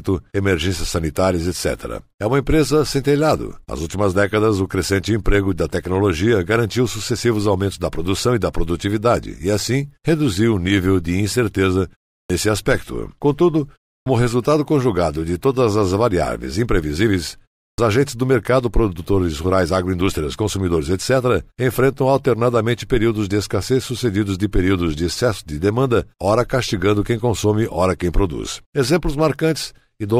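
At 12.22, 14.0 and 17.71 s, speech returns with a clipped start after a pause. Each follows a gap of about 0.3 s. The output device sleeps, then wakes late. Roughly 63 to 77 ms is lost, so words begin abruptly.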